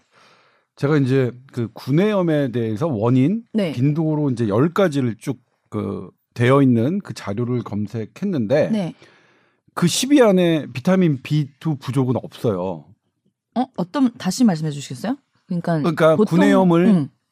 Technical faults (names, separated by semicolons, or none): DAB burbling